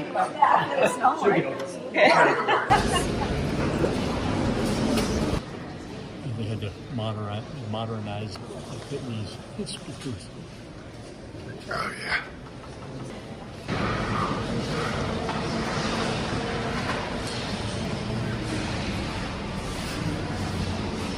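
At 3.6, 8.35, 13.1 and 17.85 s the sound jumps forward, losing roughly a third of a second each time, with the two sides butted together and no silence between them. The regular spacing marks this as audio missing between chunks, likely from a recorder handling the signal in 5 s blocks and dropping a piece at each handover. Unlike a dropout, nothing goes quiet, and unlike random packet loss, the skips come at a fixed rhythm.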